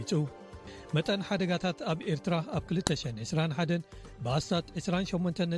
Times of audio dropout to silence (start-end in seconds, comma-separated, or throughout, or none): none